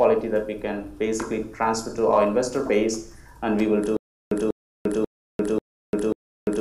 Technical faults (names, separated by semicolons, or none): stutter with silent gaps